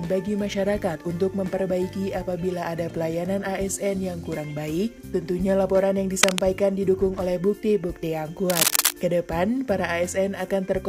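At 6.23 s a burst of cable scratch noise cuts in. It lasts until about 6.40 s. It is a dense, ragged crackle, roughly 5 dB louder than the sound beneath it. A second burst runs from 8.50 to 8.92 s. It is longer but just as rough. Both sound like scratching laid over the audio. The likely cause is a worn cable or connector being moved, its contact resistance jumping about as it shifts.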